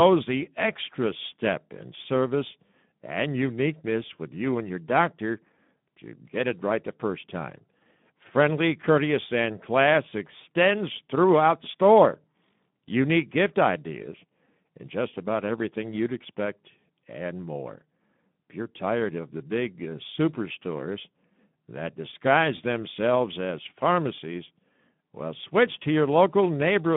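Speex codec damage runs through the whole clip, from the first second to the last. This CELP speech coder has too few bits to rebuild the excitation faithfully, so the voice comes out plainly hoarse and noisy, which fits a rate of about 11 kbps. The speech sits in a narrow telephone-style band of roughly 150 Hz to 3.6 kHz, and nothing is heard above 3.8 kHz, leaving it muffled and thin.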